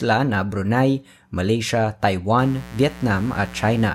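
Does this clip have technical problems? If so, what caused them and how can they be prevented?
Yes. From 2.39 s to 3.89 s a steady, raspy mains buzz sits under the speech, roughly 20 dB below it. Its fundamental is 60 Hz, and the rasp comes from a dense stack of harmonics that extends well into the kHz range. That pattern points to sharp switching spikes from a dimmer, rectifier or poorly shielded cable, repeating twice per mains cycle. Prevention: keep dimmers and switching supplies off the audio circuit, and use balanced, properly shielded cabling with a single clean ground.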